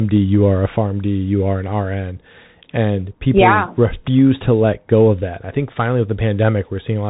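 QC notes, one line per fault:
Throughout: Bluetooth CVSD headset codec. Nothing above 3.8 kHz survives, so the speech sounds narrow. Each sample is one up-or-down step of adapting size. The steps lag fast changes, so s sounds turn scratchy over a grainy hiss. The plainly audible damage fits a 64 kbps link.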